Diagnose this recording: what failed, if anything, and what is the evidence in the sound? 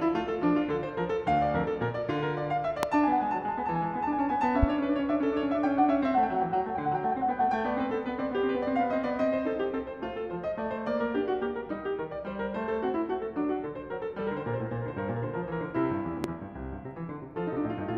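Loud pops sit on the music at 2.83 to 2.86 s, 4.63 to 4.66 s and 16.24 to 16.27 s, the first about 25 dB above the music and the others about 15 dB. This is likely an analogue-wiring fault, a voltage step from a connector or switch. Each appears as a single spike in the waveform and a thin full-height vertical line on a spectrogram.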